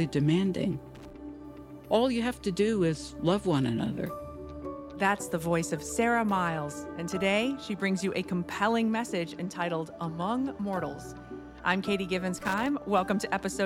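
At 0.95 to 1.14 s and again at 12.39 to 12.69 s, loose connector crackle: a worn contact making and breaking chops the signal into irregular scratchy bursts. That ragged, clustered randomness distinguishes it from evenly spaced digital clicks or steady surface noise.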